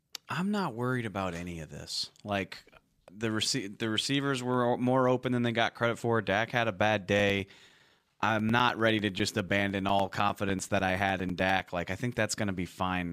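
From 7.19 s to 11.6 s, a background task stalls the USB bus or audio driver every 0.1 s, causing periodic USB or driver dropouts. Each stall replaces around 4 ms of speech with silence, producing some fifty evenly spaced ticks at ten per second, heard only while speech is present.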